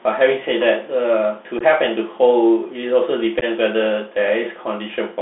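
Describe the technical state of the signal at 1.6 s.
At 1.59 to 1.62 s, unconcealed Bluetooth headset packet loss drops about 15 ms of speech, a few lost packets replaced by silence or an idle pattern. The waveform shows a sharp-edged gap and the spectrogram a thin vertical blank. Underneath, the Bluetooth CVSD headset codec, which fits a 64 kbps link, confines the speech to 200 Hz to 3.6 kHz, with scratchy sibilants and granular hiss, and an empty band above 3.6 kHz.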